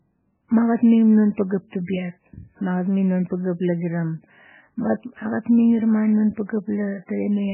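Throughout the clip, heavy MP3 compression is the likely cause: starved at a bitrate fitting about 8 kbps, the encoder has discarded everything above 3 kHz and let weak frequency lines flicker between frames. The speech sounds dull, watery and swirly, with smeared attacks.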